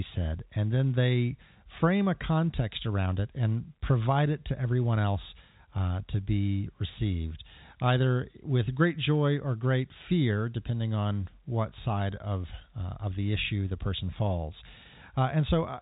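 No technical faults can be heard in the speech, which comes through the narrow band of G.711 telephone coding with nothing above 3.8 kHz.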